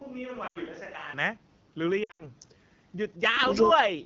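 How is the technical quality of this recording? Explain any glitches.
Technical quality is poor: the whole recording is heavily coded, the opening comes from a roomier, quieter pickup, and two short dropouts break the sound.

AMR wideband (HD Voice) codec, throughout: The audio passes through AMR-WB at 8.85 kbit/s, the second-lowest mode. At that rate the pulse-based vocal tract model has too few bits to follow the signal, so the sound is plainly rough and raspy. The top band, from 6.4 to 7 kHz, is synthesised noise rather than real detail, which adds a grainy edge.

Switch to a distant microphone, from the start to 1.13 s: The clip opens with the sound already hollow and roomy, with thinner bass and a level about 5 dB lower than what follows. Background noise sits roughly 35 dB below the signal and is more noticeable than later. The likely cause is that the close microphone was not in use and a farther pickup carried the signal until the sudden change back at 1.13 s.

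Lost AMR speech frames, 0.47 to 0.58 s and 2.04 to 2.27 s: Transmission errors corrupted coded frames, so the decoder repeated the last good pitch and vocal tract settings with falling gain. The first loss lasts 80 ms, which fits four 20 ms frames, and is heard as a quick drop to near silence. In the second, 140 ms is lost across 160 ms with runs up to 80 ms, so the sound warbles, drops and returns rough.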